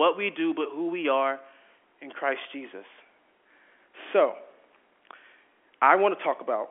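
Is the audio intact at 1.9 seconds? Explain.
Yes, the speech at 1.9 seconds is intact, carried cleanly through G.711 telephone coding with its usual narrow 300 Hz to 3.4 kHz line band and no audible damage at that moment.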